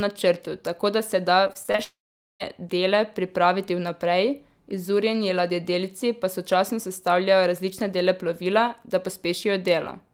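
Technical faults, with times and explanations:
1.47–1.80 s, repeated packet loss (robotic sound): Right after "tako da se da", the sound turns choppy. Six short holes, the longest 22 ms, total about 120 ms. Each is patched by stretching the previous sound, so a third of this span is filler.
1.84–2.42 s, long network dropout: About 0.56 s of audio is gone. A fading buzz continues the last sound briefly, then roughly 0.44 s of silence follows. The cause is likely a network outage. Audio resumes with "dele pripraviti vnaprej izurjeni", minus the lost part.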